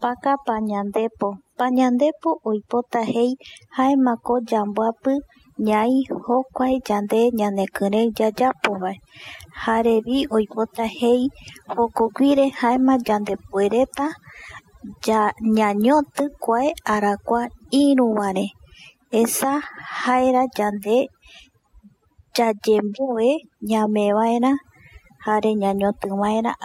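Throughout the speech, overdone noise removal leaves near-silent gaps with twinkling specks, seen on a spectrogram as scattered, blotchy bins.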